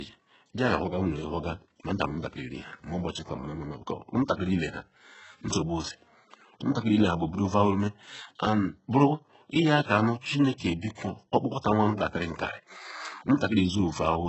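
HE-AAC compression runs through the whole speech clip. Nothing reaches above 8 kHz, and the damage is heavy, which fits a very low bitrate of around 8 kbps. The treble is likely rebuilt by spectral band replication from copied lower bands, so its harmonics don't line up and sibilants turn gritty and metallic.

Pre-echo appears from 10.21 to 10.24 s, right after "and buruiyaka nu", and again from 10.95 to 10.98 s. The codec's noise, sized for a loud attack late in a block, leaks into the quiet before it, giving a brief hiss of about 30 ms and 24 ms and a smeared onset.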